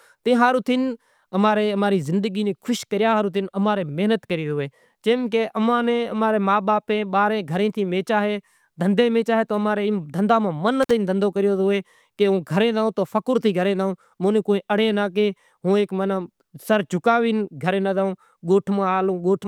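At 10.83 s the speech drops out abruptly, with a brief crackle as the sound disappears and again as it returns, and only faint hiss fills the gap of roughly 51 ms before the signal is back by 10.91 s. This is an intermittent contact: a loose plug or cable lost its connection for that instant, opening the line so the audio vanished, while the scraping metal at the moment of breaking and reconnecting produced the crackle at both edges.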